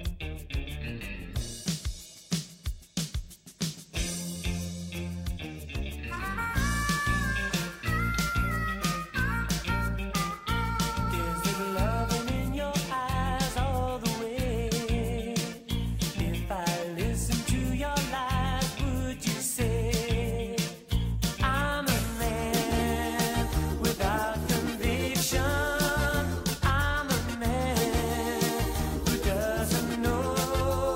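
Nothing is technically wrong with this audio.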